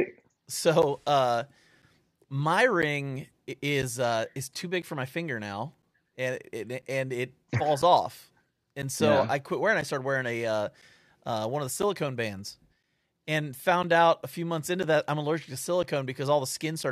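Speech recorded through a path with periodic USB or driver dropouts: from 0.82 s to 16.84 s, a tick sounds roughly every 1.0 s, about fifteen in all. Each is a gap of around 10 ms where the audio is replaced by silence, likely because a background task stalls the USB bus or audio driver on a fixed schedule. The strict one-second spacing sets this apart from random network packet loss or irregular buffer underruns.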